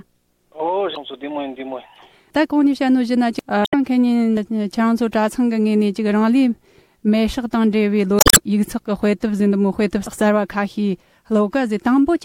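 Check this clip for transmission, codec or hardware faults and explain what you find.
Three short bursts of damaged data in a compressed stream occur, at 0.93 to 0.97 s, 3.62 to 3.74 s and 8.16 to 8.38 s. In each, corrupted bytes make the decoder misread frames and lose sync until it finds a valid frame header, so the sound is briefly broken by a chirp, squawk, click or short hole. Unlike a plain dropout, which leaves silence, or concealment, which smoothly repeats material, these bursts come from the decoder misreading damaged frames.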